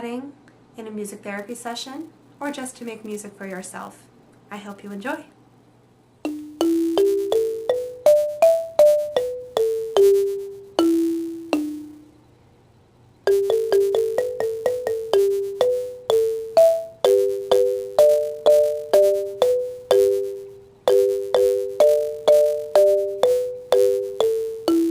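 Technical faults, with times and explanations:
1.38–24.9 s: filter restarted on every block. From 1.38 s to the end, a steady buzz at 200 Hz sits on the sound, which points to blocks about 5 ms long. The filter loses its memory at each block boundary and restarts from silence, so every block opens with a small transient, and their regular repetition fuses into a tone. Unlike mains hum, this buzz rises and falls with the signal's level and fades when the audio goes quiet.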